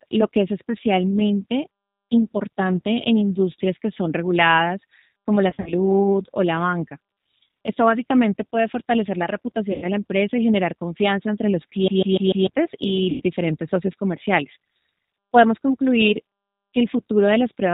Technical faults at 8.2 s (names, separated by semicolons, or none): G.729 codec